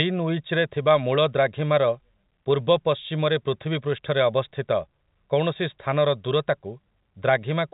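Nothing stood out on listening to this telephone-band speech, which carries the narrow G.711 sound with nothing above about 3.8 kHz.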